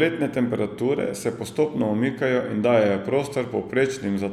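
No technical faults can be heard anywhere in the recording.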